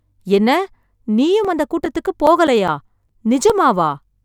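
From about 1.45 s to 3.50 s the speech picks up CD scratch ticks: eleven small clicks, roughly five a second, each only a few milliseconds long. A scratch on the disc wipes out more data than error correction can rebuild, once per revolution, and the player patches over the damage by interpolating or muting those samples. That's why you get this steady little ticking of uneven strength.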